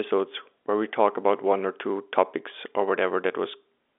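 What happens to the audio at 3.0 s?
Nothing goes wrong at 3.0 s: the speech continues intact through that moment, carried in the narrow telephone band of G.711 coding with nothing above about 3.7 kHz.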